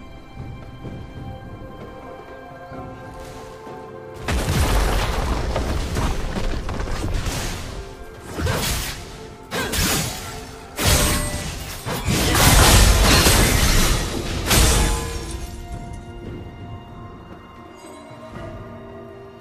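From 12.5 s to the end, a section at the wrong speed plays at 0.893x. It sounds slower and about two semitones lower, likely from a mismatched playback clock.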